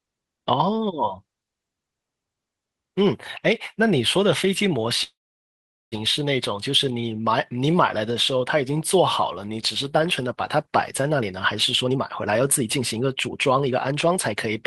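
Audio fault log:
5.03–5.94 s, call audio freeze: the sound stalls for about 0.9 s, with a brief trailing buzz before roughly 0.8 s of silence. It's likely that packets got held up and the jitter buffer ran dry. Nothing's lost, but everything after runs 885 ms later.
11.10–11.34 s and 11.84–14.14 s, jitter buffer speed-up: the sound hurries along at 120% and then 122% speed with no pitch change. The receiver is trimming tiny pitch-period slices to drain the backlog, cutting about 50 ms and then around half a second overall.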